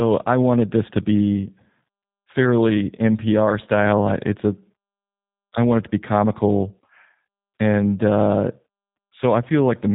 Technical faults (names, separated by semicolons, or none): G.729 codec